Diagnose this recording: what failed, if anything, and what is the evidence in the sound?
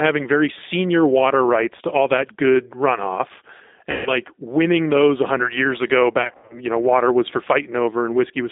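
Codec stage: the speech is confined to roughly 250 Hz to 3.7 kHz and sounds rough and synthetic throughout, consistent with G.729 coding at 8 kbit/s.

Network stage, VoIP packet loss concealed by the speech codec: after "all that good runoff" (3.91–4.10 s) and after "years ago" (6.22–6.60 s, scattered gaps), the decoder extrapolates, producing a buzzy tone or coloured noise that fades.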